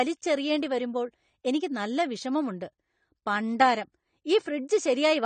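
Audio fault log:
Throughout, AAC compression. Nothing reaches above 9 kHz, so the speech sounds dull and closed in. The damage is plainly audible. Sibilants turn fizzy and smeared, and held sounds take on a warble. The likely cause is a low-bitrate AAC-LC encode, which fits roughly 32 kbps. At that rate the encoder drops the top band and codes the remaining frequency lines coarsely, leaving gaps that the ear hears as swirling texture.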